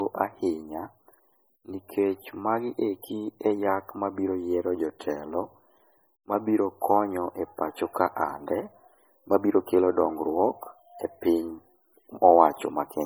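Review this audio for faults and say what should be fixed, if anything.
Throughout the speech, the audio shows low-bitrate audio saved at a high bitrate. Content extends up to about 20.1 kHz, yet the coding damage from a much leaner MP3 pass remains, which fits an earlier encode at around 32 kbit/s. The likely cause is that this lossy file was re-encoded as MP3 at roughly 320 kbit/s. The larger file cannot restore detail the first encoder discarded; the second pass only preserves the existing damage. Prevent it by exporting from the original uncompressed or lossless master rather than from a low-bitrate copy.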